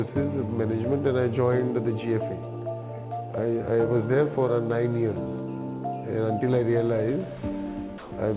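Right near the end, from 7.98 to 8.12 s, about 140 ms of the sound gives way to a flat wash of steady noise before it resumes. That's most likely sound dropped by the voice detector, which treated the tail as background and let comfort noise fill in, over the usual 4 kHz ceiling of the call path.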